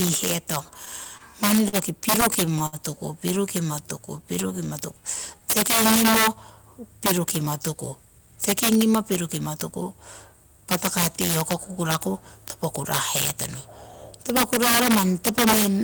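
Integer overflow runs through the whole of this speech recording. The signal was driven about 12 dB past the integer limit, and instead of being held at full scale, the peaks that exceeded it wrapped around to the opposite sign. Only a small fraction of samples, around one and a half percent, cross the limit, but each one jumps across the entire range, so the loudest moments break into harsh, violent cracks far sharper than ordinary clipping. Repeated stalls (stutter) occur from 0.85 to 1.76 s and again from 2.21 to 2.76 s. Audio packets reached the receiver late, and its jitter buffer ran dry five times in the first span and four in the second. Each time, the receiver stretched the last sound to cover the wait: 94 ms of fill in the first span and 98 ms in the second, with the longest single gap 45 ms and 65 ms respectively. Nothing is lost, but the speech catches and drags in small hiccups. 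A jitter buffer slow-down follows from 3.82 to 5.40 s, where the receiver built up its reserve by repeating individual pitch periods and bits of pause. That adds 108 ms and plays this stretch at 94% speed with the pitch unchanged, so sounds come out drawn out. A jitter buffer speed-up runs from 7.43 to 9.84 s, where the buffer held more audio than its target. The receiver trimmed short pitch-period pieces, removing about 150 ms, so speech runs at 106% speed at unchanged pitch and sounds hurried.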